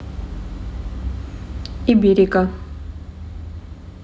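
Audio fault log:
1.90–4.04 s, one channel drops out: the speech falls abruptly by about 6 dB at 1.90 s and stays at that lower level to the end of the clip, with no fade or recovery. The likely cause is one stereo channel going silent. In the mono sum, material shared by both channels then comes from only one side, so it loses half its amplitude, which is the 6 dB step heard here.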